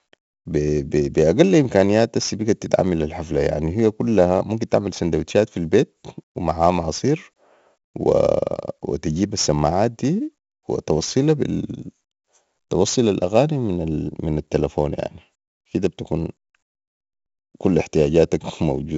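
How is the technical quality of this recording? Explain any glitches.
Technical quality is poor. From start to finish the speech carries 4-bit ADPCM compression damage: a gritty hiss riding every loud syllable, smeared consonant attacks where the coarse step size lags, and no content above about 7.7 kHz, which points to a 64 kbps stream at a 16 kHz sample rate.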